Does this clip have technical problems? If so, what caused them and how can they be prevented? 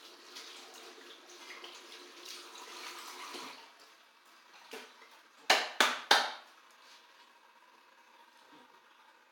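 No, this clip has no technical problems, so there is nothing to prevent.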